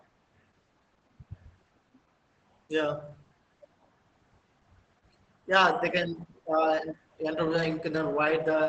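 Throughout, Opus voice compression in its SILK mode cuts everything above 8.7 kHz and coarsely codes excitation, giving muffled, hoarse, robotic speech. That texture fits roughly 10 kbps, unlike a plain low-pass.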